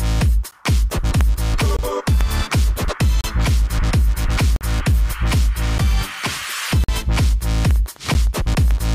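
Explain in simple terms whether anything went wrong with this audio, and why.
Two things went wrong. The first is a repeated block of digital silence. At 0.51 s, 1.77–1.79 s, 3.21–3.24 s, 4.56–4.61 s, 5.78 s, 6.84–6.89 s and 8.14 s, the sound drops to nothing and comes straight back with no fade. The shortest gaps, about 12 ms, are heard as ticks. The longest, about 46 ms, are short holes. Most of the gap lengths fit whole audio buffers of 512, 1024 and 2048 samples, so the software most likely failed to deliver each buffer in time.

The second is Wi-Fi interference, from 7.5 s to the end. A nearby Wi-Fi radio's signal is being picked up and rectified by the audio circuitry. Its beacon repeats every 102.4 ms, which produces a steady ticking about ten times a second. The ticking sits well below the main sound. It also overlaps the last dropout at 8.14 s.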